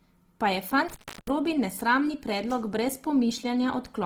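From the start, this speech has a grainy, rough texture. That fits Opus compression in its music mode, likely at a low rate around 16 kbps. The band is still full, reaching about 20.4 kHz. The encoder fills thin bands with folded or noisy content, so detail turns coarse.

From 0.89 to 1.30 s there is an intermittent contact. A loose connection opens for about 0.33 s. The sound drops out, with crackle at both edges and faint hiss in the gap. It returns just before "nesramni predlog brez".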